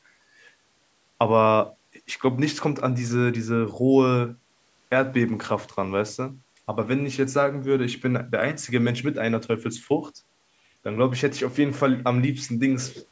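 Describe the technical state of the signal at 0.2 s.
At 0.2 s the speech is intact, with only the normal call microphone processing audible as a slightly trimmed low end and nothing above 8 kHz.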